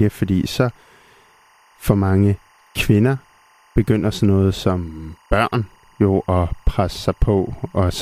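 Timecode bleed runs under the speech from start to end: leaked code chirps faintly near 1 and 2 kHz, showing as steady spectrogram bands, its rhythm fitting 23.976 fps.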